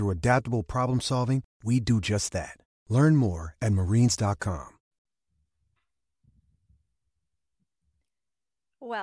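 No faults detected; the speech recording shows no audible defects at any point.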